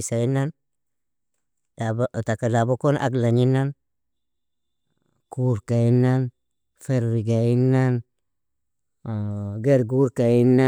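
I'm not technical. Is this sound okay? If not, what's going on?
Yes, this sound is okay, and nothing is going wrong with it.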